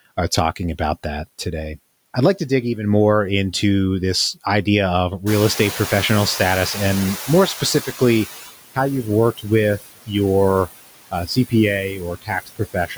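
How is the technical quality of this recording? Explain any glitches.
The recording has noise suppression problems throughout, plus a few specific glitches.

Noise suppressor artifacts run through the whole clip. The suppressor treats steady background as noise and pulls those bands down, by about 18 dB here, deciding frame by frame. So the background sinks in the gaps between words and swells back up underneath them.

The noise suppressor is catching up from 5.26 to 8.43 s. The room noise jumps by about 18 dB around 5.5 s and ends up about 13 dB below the speech, which is just the room itself. The suppressor's noise estimate lags behind that jump, so the louder background comes through with only about 13 dB of reduction at first. It then settles down over roughly 3.2 s as the estimate adapts.

Speech is cut by the noise suppressor at 9.79–10.11 s, 11.11–11.53 s, and from 11.91 s to the end of the clip. 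In each case the suppressor mistook parts of the speech for noise and turned them down with the background. The deepest drops are about 21, 17 and 22 dB respectively. Roughly 200 ms, 100 ms and half a second are affected in each span, so soft bits of speech sound swallowed or faint.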